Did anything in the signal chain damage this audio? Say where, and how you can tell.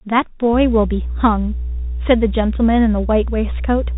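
Yes. The codec stage is the culprit: a Bluetooth CVSD headset codec throughout. Nothing gets past 3.8 kHz, and the granular hiss and scratchy sibilants point to a 64 kbps one-bit delta stream whose step can't keep up.

There's mains hum in the analogue wiring, too: a steady 60 Hz tone from 0.53 s to the end, loud, only a few dB under the speech, which suggests a ground loop or nearby transformer.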